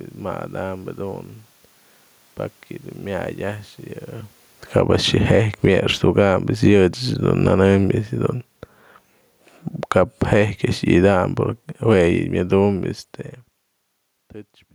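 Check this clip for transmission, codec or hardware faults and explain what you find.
Automatic gain falling occurs twice: the gain control judged the input too loud, or its background noise too strong, and pulled its gain down, about 11 dB from 4.61 to 7.65 s, then about 5 dB from 9.81 to 11.22 s. The voice sinks gradually, with the room noise dropping alongside it.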